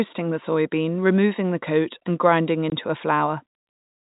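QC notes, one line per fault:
2.7 s, packet loss filled with silence: right after "the coat and grinding" the speech drops out abruptly for about 20 ms, leaving a short hole of dead silence with hard edges as the sound cuts off and returns. One packet of audio failed to arrive, and the receiver played silence in its place. The gap length fits a single 20 ms packet. The telephone-band G.711 coding can be heard as the usual 4 kHz ceiling.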